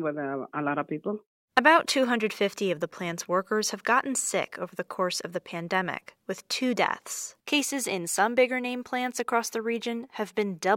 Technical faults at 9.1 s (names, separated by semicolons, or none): none